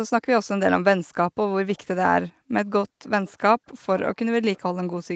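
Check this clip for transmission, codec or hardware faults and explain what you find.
Two brief bursts of echo leak are present in this speech recording, which is band-limited to 8 kHz by the call path. From 3.26 to 3.32 s and again from 4.55 to 4.60 s, a faint copy of the speech comes back about 398 ms after the original, at about 30 dB below it. The likely cause is a far-end loudspeaker whose echo canceller let a residue of its microphone pickup through and returned it down the line.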